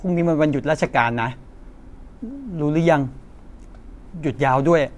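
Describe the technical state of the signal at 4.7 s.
At 4.7 s the signal is intact, with no audible dropout, distortion, glitch or other technical fault at that moment.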